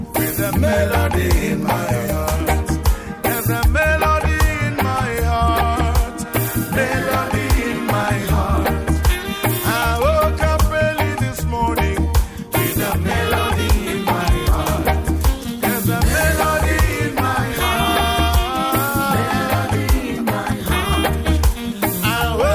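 No technical faults can be heard anywhere in the clip.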